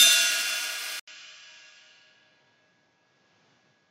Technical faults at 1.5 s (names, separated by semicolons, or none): input switched to a poorer device